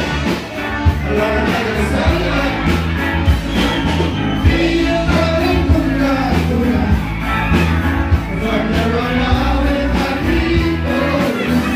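No dropouts, clicks, distortion or level jumps turn up anywhere in the recording.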